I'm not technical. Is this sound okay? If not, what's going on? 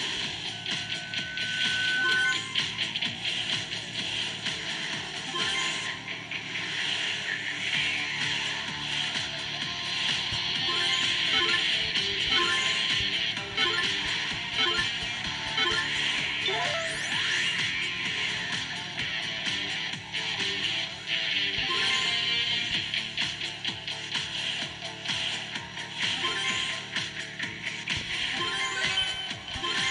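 No. There is loudspeaker feedback squeal from 0.52 to 2.39 s: a single high tone at about 1.5 kHz that swells over roughly a second and a half until it is louder than the rest of the sound. A microphone picked up the loudspeaker it was feeding, so that one pitch went around the loop again and again, growing each time, until the squeal stopped.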